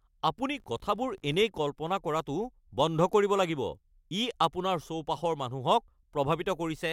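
From 0.54 to 1.45 s, just before "কল্পনা কৰাটো বন্ধ কৰিব", the filter restarted on every block. Its state is wiped at each boundary, leaving a small tick per block that forms a 50 Hz buzz. Unlike steady mains hum, it swells and fades with the speech level.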